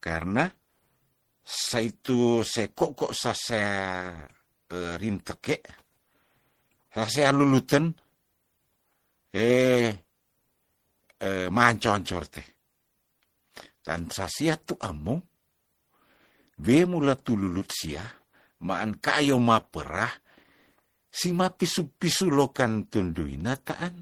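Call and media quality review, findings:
Throughout: two stacked artefact textures on speech, content up to 20.1 kHz. Likely transcoding between lossy codecs, fitting low-rate Opus then MP3 near 64 kbit/s re-encoding earlier damage.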